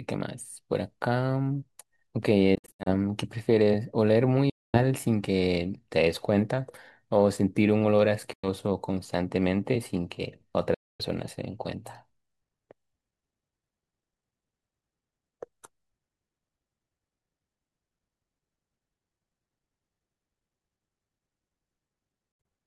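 Speech with silent gaps at 2.55–2.89, 4.50–4.79, 8.33–8.48, 10.74–11.02 and 22.32–22.47 s, likely Bluetooth dropout from packets arriving too late; the first and last are clusters of holes up to 70 ms. Unlike an edit cut, speech resumes further along, as though it played on.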